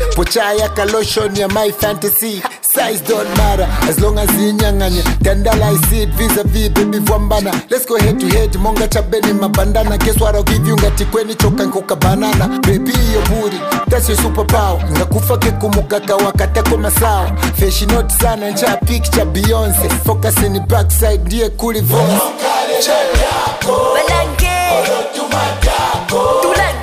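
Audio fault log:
No faults were found in this audio. No entries are logged for it.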